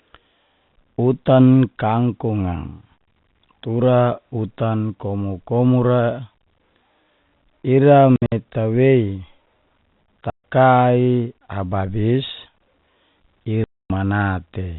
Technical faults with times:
8.16-8.32 packet loss filled with silence
10.30-10.43 packet loss filled with silence
13.64-13.90 packet loss filled with silence

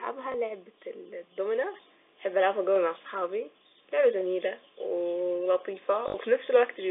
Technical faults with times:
0.32-0.34 packet loss with last packet repeated
1.74 microphone volume stepped up
3.78 microphone volume stepped up
4.80 microphone volume stepped up
6.08-6.14 packet loss with last packet repeated

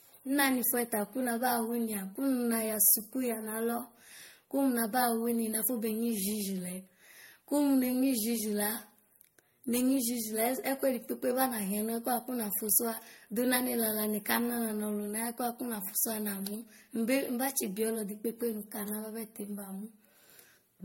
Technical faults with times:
0.00-20.84 generation loss

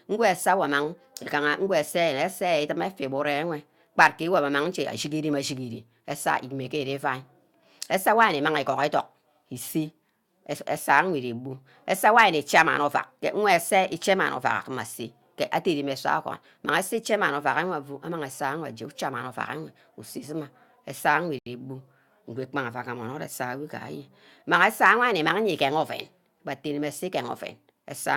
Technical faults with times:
21.39-21.47 Bluetooth stall

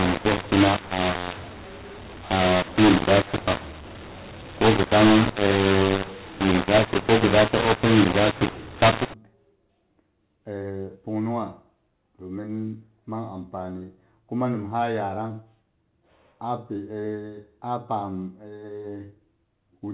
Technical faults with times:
0.00-9.14 mu-law and A-law mixed up

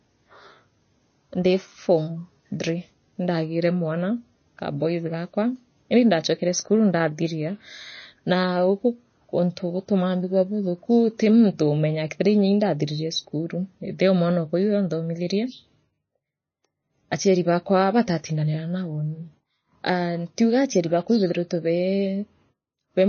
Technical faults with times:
0.00-23.09 MP3 compression

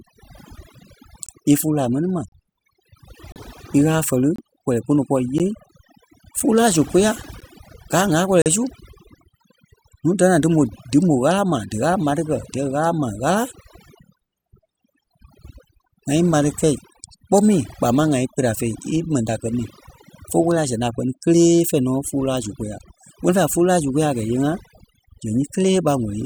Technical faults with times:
0.00-26.25 overdone noise removal
1.26-1.29 gap between stream segments
2.28-2.32 gap between stream segments
3.32-3.36 gap between stream segments
4.36-4.38 gap between stream segments
5.38 gap between stream segments
6.40 gap between stream segments
7.40 gap between stream segments
8.42-8.46 gap between stream segments

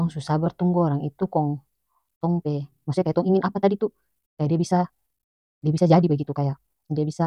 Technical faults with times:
2.13-7.26 time-stretched section

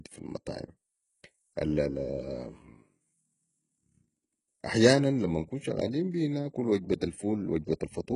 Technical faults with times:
0.00-8.16 HE-AAC compression

